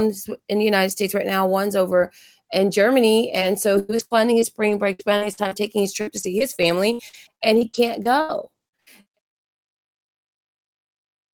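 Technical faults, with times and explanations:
3.35–5.53 s, repeated packet loss (robotic sound): About ten short holes open in the sound, the longest 96 ms. Each is filled by stretching the last sound forward, so the audio turns choppy just before "taking his". Roughly two-fifths of a second is patched audio.
6.01–9.35 s, repeated packet loss (robotic sound): The effect returns after "taking his", with about seventeen holes up to 80 ms long. It stays robotic until "I say he can't", even through the smooth fade-out that ends at 9.20 s.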